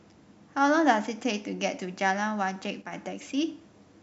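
From 2.82 to 2.93 s the speech level drops by about 6 dB, then snaps back. The likely cause is one channel dropping out before a mono sum, halving the shared signal. The waveform shows a sharp-edged notch, and the spectrogram dims evenly across all frequencies.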